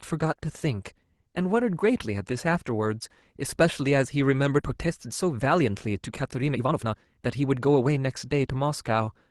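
At 4.59 to 4.61 s the speech lurches forward with no gap or fill: about a second and a half of speech is simply gone, the two sides butted together. This is a skip ahead, where buffered audio was discarded because later packets were already queued and waiting.

From 4.69 s to 9.08 s the speech sounds hurried yet keeps its normal pitch, running at about 116% speed. This is a jitter buffer speed-up: the receiver, holding too much audio, trimmed short pitch-period slices repeatedly, removing roughly 0.7 s in total to cut the delay.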